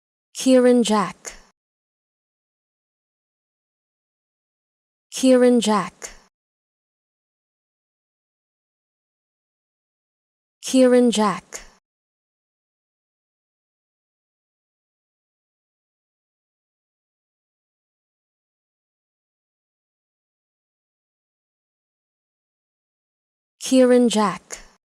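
No technical faults can be heard anywhere in the recording; the signal stays continuous and stable throughout.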